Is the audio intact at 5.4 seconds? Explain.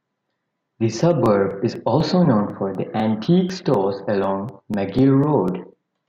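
No. A USB or driver dropout recurs every 0.25 s from 0.26 to 5.98 s, skipping about a millisecond of audio each time, heard as regular ticks during the speech.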